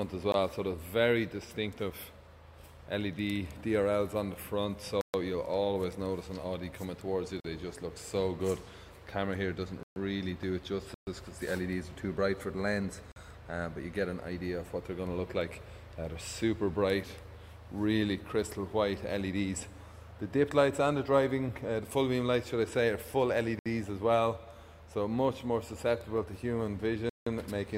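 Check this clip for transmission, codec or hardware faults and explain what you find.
The clip has repeated blocks of digital silence. They occur at 0.32 s, 5.01–5.14 s, 7.40–7.44 s, 9.83–9.96 s, 10.94–11.07 s, 13.12–13.16 s, 23.59–23.66 s and 27.09–27.27 s. The gaps run from about 19 ms to 171 ms, with several at 128 ms. The 43 ms and 171 ms ones fit 2048- and 8192-sample buffers. Each time, the output buffer likely wasn't filled in time and went out as zeros, so the sound drops abruptly to nothing and snaps back. You get audible holes in the sound, longer on the longer gaps.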